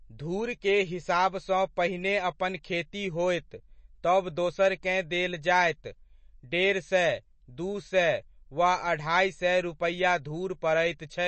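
MP3 compression throughout: treble stops near 8.3 kHz, with plainly audible watery swirl, likely from a starved encoder dropping weak frequency lines, consistent with roughly 32 kbps.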